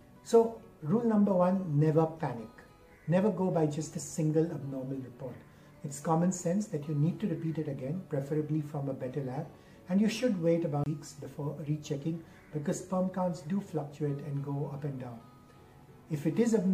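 At 10.84 to 10.86 s there's a CD skip: the laser hopped to another track turn, so you hear a tick, a brief mute, then the audio resuming elsewhere.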